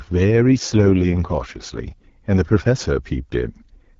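From 0.56 to 1.80 s there is an AMR rate drop. The wideband codec leaves its clear 12.65 kbit/s rate for a far lower one, which fits 6.6 kbit/s. The band holds. Nothing cuts out. The voice turns rough and raspy instead.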